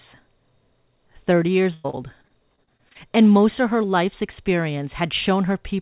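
From 1.74 to 2.97 s, just before "and most of her", the speech breaks up with repeated packet loss (robotic sound). Ten gaps, the longest 101 ms, are patched by extending the preceding sound, concealing about a quarter of the stretch. The result is choppy, robotic speech with pieces missing. The call path's band limit, with nothing above 4 kHz, fits a G.711 mu-law codec.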